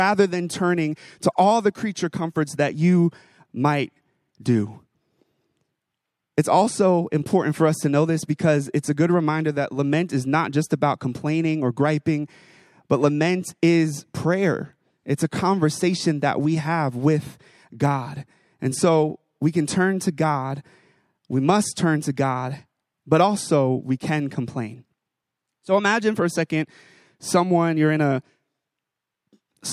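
No technical faults can be heard anywhere in this speech recording. The sound continues without any audible disturbance at any point.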